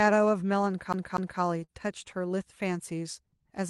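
At 0.93 s the speech begins to stutter like a CD stuck on one turn. A single segment about 0.24 s long plays twice in a row, with a brief mute at each jump back. The effect ends at 1.41 s. The mechanism is a scratch that returns the laser to the same track position on every revolution. The result is this quick, evenly spaced repeat of an identical slice of audio.

From 1.64 to 1.70 s there is a short concealed packet loss. About 40 ms of the call stream failed to arrive in time. The receiver synthesised roughly 42 ms to bridge the gap by extending the preceding sound and then crossfading into the returning audio. The result is a brief smear in the speech at that point. The audio passes through a call codec whose sound points to Opus at around 32 kbps, with content rolling off above about 12 kHz.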